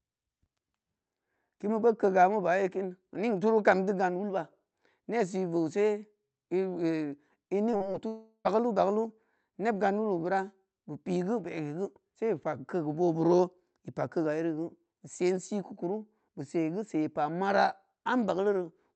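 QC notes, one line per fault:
7.71–7.75 s, 7.77–7.82 s and 7.92–7.96 s: short concealed packet loss. Three little holes of about 20, 40 and 20 ms went missing, and the decoder papered over each by stretching the preceding sound before blending back in. That's why you get quick smeary wobbles there.
8.08–8.47 s: long network dropout. Roughly 380 ms is gone. The last sound carries on as a fading continuation for most of it, then there's a brief stretch of near-silence before the audio picks up again. That's likely a gap where nothing arrived at all.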